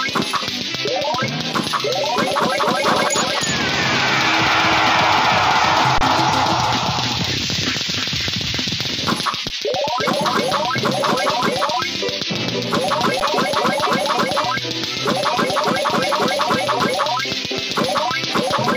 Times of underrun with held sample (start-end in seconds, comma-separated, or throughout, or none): 5.98-6.01, 9.49, 13.20